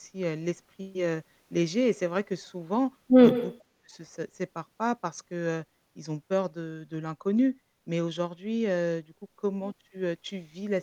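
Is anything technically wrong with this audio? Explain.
Yes. From 3.31 to 3.58 s there is an echo leak. A faint copy of the speech returns 124 ms late, likely from a loudspeaker whose echo canceller missed it. From 3.67 to 3.95 s the speech is suppressed in double talk. It drops almost to silence for about a third of a second, likely because the canceller muted this talker during overlap.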